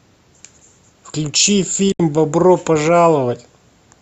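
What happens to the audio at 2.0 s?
A digital broadcast dropout runs from 1.92 s to 2.0 s. The receiver lost usable frames and muted, fading out over 3 ms. About 72 ms of speech is gone, a hole that fits three lost frames, before sound resumes at 2.0 s.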